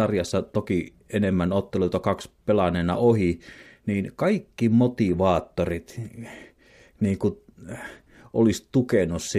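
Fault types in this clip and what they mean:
Nothing stood out on listening to this speech recording.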